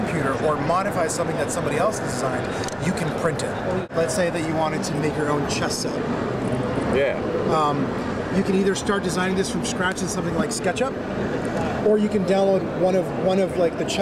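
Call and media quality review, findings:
No audible faults found in this recording.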